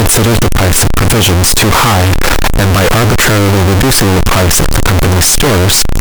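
From start to end the speech is extremely loud and harsh, with background noise as loud as the talker, though pitch stays followable. The waveform sits almost square at an almost fixed, high level, and the spectrogram shows dense broadband energy everywhere, likely a float read as integer, 32-bit float samples taken as 32-bit integers.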